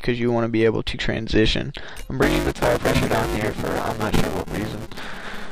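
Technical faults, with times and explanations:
2.22 to 5.51 s, buffer tearing: a steady robotic buzz at about 200 Hz appears, riding on the sound. Writer and reader have slipped within the ring buffer, so roughly two fifths of each 5 ms period replays audio about 10 ms stale, hard-spliced at both edges.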